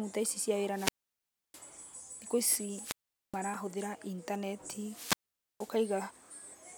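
Wireless microphone squelch dropouts occur three times: 0.68 to 1.66 s, 2.76 to 3.41 s, and 4.79 to 5.81 s. Each time the speech swells into hiss as the radio link from the transmitter weakens. The receiver's squelch then shuts the output, leaving holes of near silence lasting about 0.66 s, 0.42 s and 0.47 s respectively, before the signal recovers and speech resumes.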